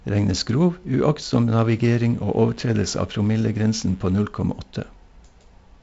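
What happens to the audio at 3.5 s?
At 3.5 s the speech sits over a DECT cordless phone buzz, running from 1.60 to 4.17 s. A nearby DECT transmitter's radio bursts every 10 ms are rectified by the audio circuit, giving a thin, harmonic-rich 100 Hz buzz well below the speech. Mains hum, by contrast, is a smoother, rounder tone.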